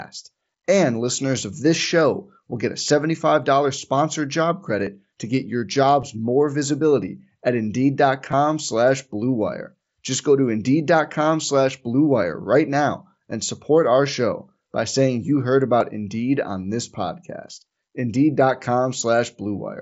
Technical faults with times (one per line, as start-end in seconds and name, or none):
4.86 concealed Bluetooth headset packet loss
6.01 concealed Bluetooth headset packet loss
8.31 concealed Bluetooth headset packet loss
15.80 concealed Bluetooth headset packet loss